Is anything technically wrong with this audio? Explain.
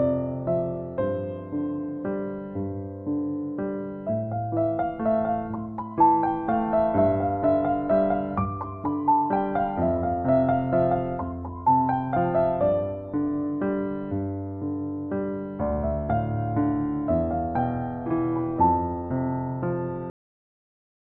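Yes. There is a cut-off end at 20.1 s. The final buffers of audio were never written out or played back, so the sound stops mid-event with no natural decay and drops abruptly to digital silence for the remaining second or so.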